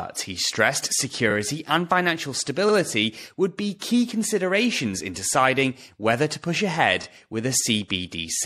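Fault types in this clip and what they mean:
MP3 compression: The speech sounds watery and swirly throughout, with dulled treble and smeared consonant onsets, which points to likely lossy MP3 encoding at around 64 kbps, where the encoder runs short of bits, cuts the top end and drops quieter frequency detail.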